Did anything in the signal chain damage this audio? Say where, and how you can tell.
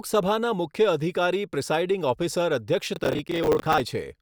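Yes. Processor overload crackle at the driver or buffer stage, from 2.96 to 3.80 s: a gritty tearing rides on the speech as the processor keeps missing deadlines on short buffers of roughly 10 ms, replaying stale audio with hard edges. On a spectrogram, dense broadband vertical streaks; the waveform shows repeated chunks with abrupt joins.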